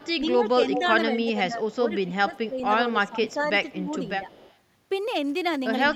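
From 0.00 to 0.14 s an echo leak appears: a faint delayed copy of the speech, about 30 dB below it, trailing by 199 ms. The likely cause is a loudspeaker on the far end whose echo canceller let part of the microphone pickup through. It returns at 0.58–0.87 s much louder, only about 5 dB under the speech, and then again faintly at 1.71–2.05, 2.37–2.45, 3.28–3.33 and 4.07–4.56 s. On a spectrogram each leak shows as a ghost of the harmonic pattern offset 199 ms to the right. The waveform shows small extra bursts sitting in what should be gaps.

Overlapping this, from 0.32 to 4.29 s, is speech suppressed in double talk. With both sides talking at once, the canceller likely could not separate the talker from the echo and pulled everything down. In roughly two seconds of pieces, the level dips by up to about 10 dB and sounds ducked or thinned. The waveform envelope shows abrupt notches, and the spectrogram shows upper bands fading in patches. 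A brief repeat occurs at 5.91–5.95 s.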